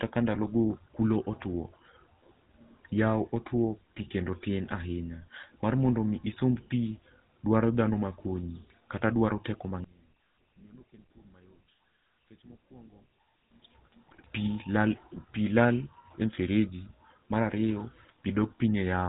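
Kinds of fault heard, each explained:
GSM full-rate codec: The whole clip has gone through the original full-rate GSM coder, and the damage is plainly audible. It models the vocal tract as a filter and drives it with a sparse, regularly spaced pulse train, keeping only every third excitation sample. That leaves the speech sounding buzzy and gravelly, with nothing getting through above 4 kHz. The dull, rough character fits the 13 kbps full-rate mode.
GSM bit errors: Two spots where corrupted bits made it into the decoder, the kind of thing a weak radio link produces. When the filter, pitch or gain parameters arrive scrambled, the decoder bends the spectrum or spikes the level for that frame. From 14.08 to 14.27 s there's a longer patch of squawky, gargling breakup spread across several frames. At about 16.35 s there's just a short pop lasting a frame or two.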